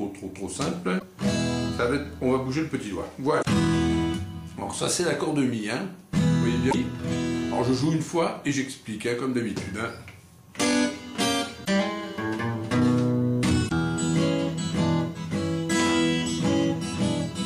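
Damaged data in a compressed stream causes five brief glitches of about 70 ms each, at 0.96–1.03, 3.38–3.45, 6.68–6.74, 11.61–11.68 and 13.65–13.72 s. Corrupted bytes make the decoder misread those frames and lose sync until the next frame header, producing short chirps or blips in the sound.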